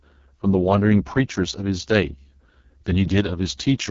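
From start to finish the speech passes through the AMR wideband (HD Voice) codec, and the damage is heavy. The sound is rough and raspy, which fits the lowest 6.6 kbit/s mode, where the vocal tract model and pulse excitation are too coarse for this speech. On a spectrogram the harmonics look smeared and grainy below 6.4 kHz, a noise-like band fills the top, and nothing appears above 7.4 kHz.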